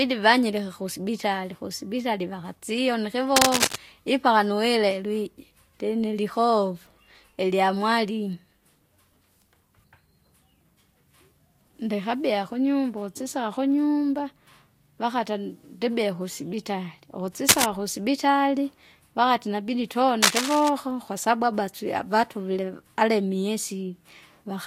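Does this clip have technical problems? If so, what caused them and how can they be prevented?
Yes. Cable scratch noise occurs at 3.36–3.77 s, 17.48–17.64 s and 20.21–20.69 s, as loud as the speech or, in the second burst, louder. It is likely a worn, moved connector whose contact resistance fluctuates. On a spectrogram it shows as ragged broadband smears. Replace worn cables and keep connectors still during recording.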